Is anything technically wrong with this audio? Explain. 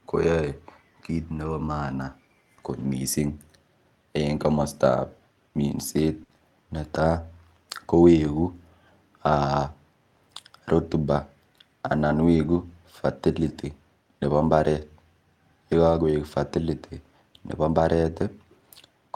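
Yes, two kinds of network trouble show up in this speech.

Lost packet rebuilt from error correction: at 1.45–1.47, 2.79–2.85, 4.51–4.65, 12.29–12.59 and 15.89–15.95 s, short stretches sound rougher and noisier, from 20 ms up to 160 ms. There's no gap because the decoder played the low-bitrate backup copy carried in the following packet. The longest one, at 12.29 s, fits several separate losses close together.

Burst of packet loss: at 6.23–6.31 s the receiver had nothing to play, so it stretched the last sound for about 60 ms and faded it down into a held buzz or hiss. Then the speech jumps ahead, skipping roughly another 60 ms.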